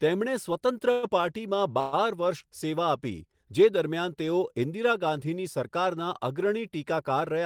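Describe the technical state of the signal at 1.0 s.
At 1.0 s the speech is caught in a call audio freeze from 0.91 to 1.05 s. The last sound is stretched into a short fading buzz. This is likely late packets emptying the jitter buffer. Nothing is lost, and the speech resumes about 115 ms later than before.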